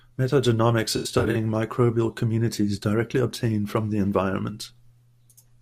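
From 0.97 to 1.36 s the speech breaks up with AAC frame loss and concealment. Several AAC frames go missing, scattered across about 384 ms, about 213 ms in total. That fits roughly ten lost frames. The decoder patches each gap from the last good spectrum. It scrambles signs or smooths the energy. The result sounds smeared, noisy and phasey. The longest gap runs about a tenth of a second.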